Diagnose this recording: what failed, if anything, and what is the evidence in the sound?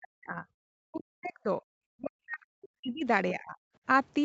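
Speech suppressed in double talk at 0.0–0.47, 0.8–1.62, 1.9–3.05 and 3.32–3.57 s. The waveform drops about 40 dB (about 25 dB in the last), likely from echo-canceller ducking in call processing.

Other side's voice leaking through at 0.96–1.03 s, about 30 dB below the talker. It shows as a faint spectrogram smear, likely residual loudspeaker echo the canceller missed.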